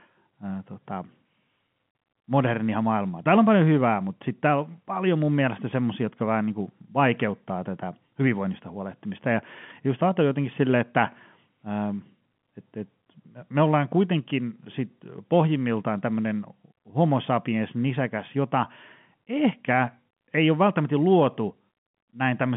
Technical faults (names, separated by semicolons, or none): none